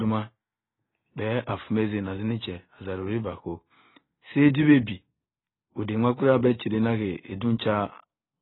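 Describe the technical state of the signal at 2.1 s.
At 2.1 s the speech carries heavy damage that runs through the whole clip, likely from AAC compression. Nothing remains above 4 kHz. The coder has starved the upper bands, which fits a very low bitrate near 16 kbps. Sibilants sound dull, smeared and warbling.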